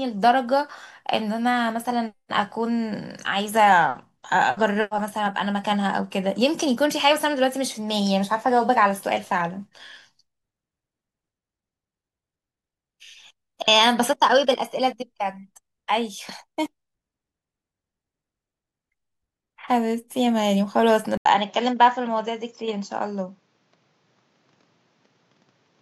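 At 21.17 s an 80 ms gap appears in the waveform. The speech then returns duller until the end, at similar level, over faint new background noise, likely an input switched to a poorer device. On a spectrogram the content is abruptly capped at 7.6 kHz.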